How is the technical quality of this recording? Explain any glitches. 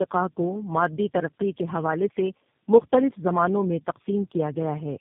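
The quality is poor. The speech is rough and muffled throughout, with a faint ticking running under most of it.

Tandem speech coding affects the whole clip. The voice sounds gritty, dull and warbly, with nothing above 3.7 kHz. The degradation fits three low-rate codecs in a row (GSM full rate, AMR-NB, then G.729A), each re-encoding the previous one's already damaged output, so the errors pile up.

Clock slip clicks run from 0.25 s to 4.93 s. They are faint, regular ticks about every 0.15 s, some thirty in all. The likely cause is two unsynchronised clocks differing by roughly 150 ppm, with a single sample dropped or repeated at each slip.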